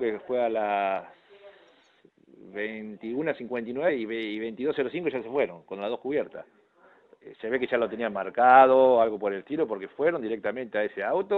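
At 3.88 s, damaged data in a compressed stream makes the decoder misread a frame and resync, showing as a brief broadband vertical stripe on the spectrogram and a glitch in the waveform.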